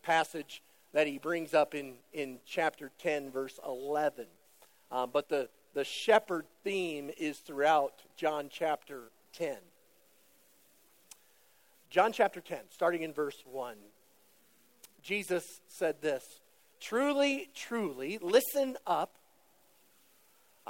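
Resampler restarted on every block, throughout the clip: the sample-rate conversion, which fits a change from 44.1 kHz to 48 kHz, was run on each 10 ms block separately. At every block edge the converter had no real neighbouring samples to work from, so each boundary carries a small error. At 100 per second these errors merge into a steady 100 Hz buzz that rides on the sound and disappears in silence.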